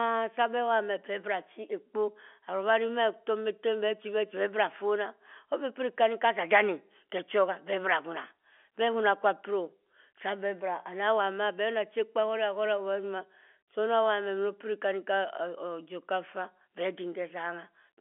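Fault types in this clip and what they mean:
No faults can be heard in this speech clip. It has passed through G.711 telephone coding at 64 kbps, which fits a mu-law line, so the sound stays within the telephone band of roughly 250 Hz to 3.4 kHz, with nothing above about 3.7 kHz and at most a faint level-following quantisation hiss.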